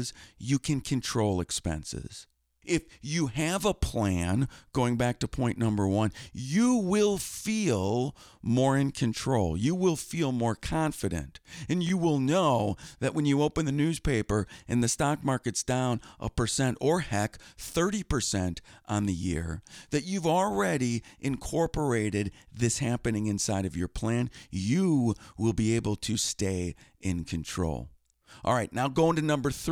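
Speech with chunks out of order from 11.87 to 11.90 s, just before "will know that when": an 11.6 ms chunk plays two chunks late, giving a brief jumble. The waveform shows three abrupt discontinuities, and the spectrogram shows thin vertical broadband lines at each join.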